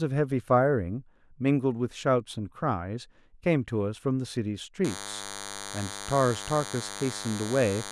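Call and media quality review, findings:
DECT cordless phone buzz, 4.85 s to end of clip. Steady thin buzz under the speech, around 10 dB below it. Nearby DECT handset or base pulsing every 10 ms; audio circuitry rectifies the bursts. Spectrogram: evenly spaced horizontal lines at 100 Hz and its harmonics, high into kHz range. Waveform: regular 10 ms spiky pattern in the gaps.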